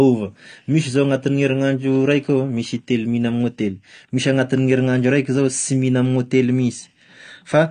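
Low-bitrate AAC compression, likely AAC-LC at around 32 kbps, runs through the whole speech clip, with nothing above about 9.6 kHz. The dull top end and plainly audible smearing come from coarsely quantised spectral detail, giving sibilants a fizzy, warbling texture.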